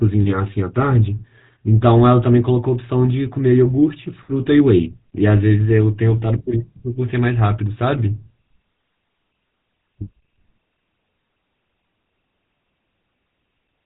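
Speech heard through the GSM full-rate codec from start to finish, with plainly audible codec damage: a buzzy, gravelly roughness, which fits a bitrate of about 13 kbps. The codec imitates the vocal tract and excites it with evenly spaced pulses built from a sparse, decimated excitation, and that coarse excitation produces the grit. On a spectrogram all energy stops sharply near 3.9 kHz, leaving the band above empty for the whole clip.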